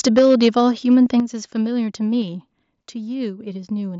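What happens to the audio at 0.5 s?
Right up to 0.5 s the speech carries a harsh, crackling edge on its loudest syllables, the sound of microphone overload, running from 0.07 s and ending at 0.49 s. The likely cause is an input level set too high: the peaks push about 7 dB past the converter's ceiling and have their tops sheared flat, with around one sample in twenty clipped. The light graininess of the mSBC headset link is separate from this.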